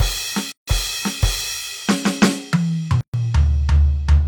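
A music clip interrupted twice by a gap at a join of encoded pieces: silence opens at 0.52 s for about 157 ms, then again at 3.01 s for about 128 ms, and the music resumes where it stopped. The pieces were encoded separately and spliced without trimming, so each encoder's start-up delay and final-frame padding remain as dead air, with edges smeared by the codec.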